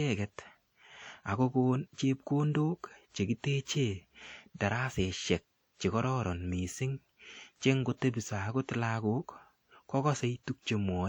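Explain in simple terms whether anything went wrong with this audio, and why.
Something did go wrong: the speech was most likely squeezed through WMA compression, an older Windows Media Audio encoder set to keep the file small. Such a codec chops sound into fairly long blocks and throws away detail it judges unimportant, and the resulting errors smear across each block. From start to finish you can plainly hear it: a ringing, washy edge on the voice and a hiss that swells and fades along with the speech.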